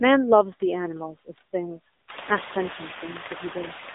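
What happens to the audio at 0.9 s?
At 0.9 s the sound carries noise suppressor artifacts, present across the whole clip. The suppressor pulls down bands it judges to be steady noise, here by only about 5 dB. The noise sinks between words and rises under them. On a spectrogram the noise floor looks blotchy, with patches flickering frame to frame.

The AMR narrowband mobile codec also affects the whole clip. It rebuilds the signal from a vocal-tract model driven by sparse pulses, giving a plainly buzzy, synthetic quality that points to a low-rate mode around 8 kbps. On a spectrogram the band sits between 300 Hz and 3.7 kHz, with nothing above 3.8 kHz. The room noise stays low here and rises only near 2 s.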